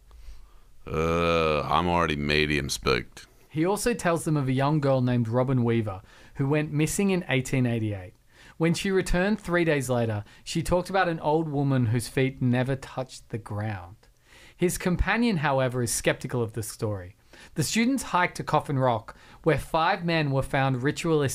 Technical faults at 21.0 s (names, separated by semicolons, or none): none